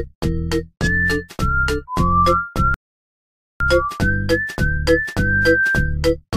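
At 2.74 s the sound stops dead and falls silent until 3.60 s. This is a rebuffering stall. The player used up the audio it had downloaded before the next portion arrived, so playback paused and waited. When data came in, it picked up at the exact point where it had stopped. Nothing is skipped or repeated. The gap simply adds about 0.86 s of silence to the timeline.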